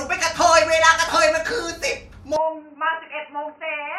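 At 2.36 s the speech turns abruptly dull and boxy and stays that way to the end: nothing above 3 kHz remains, the level drops by around 5 dB, and a new faint background noise appears well below the speech. There is no silence at the change. The likely cause is the input switched to a poorer device. Unlike a plain filter or EQ change, the bandwidth, level and noise floor all shift together at one instant.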